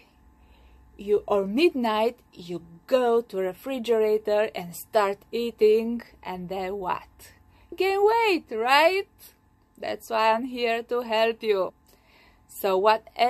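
At 11.68 to 11.70 s there is a brief burst of damaged data in the compressed stream, lasting about 20 ms. A short stretch of the encoded bitstream is corrupt, so the decoder cannot interpret those frames correctly and has to resynchronise on the next valid frame header. The result is a sudden, out-of-place blip that breaks the audio for an instant before normal decoding resumes.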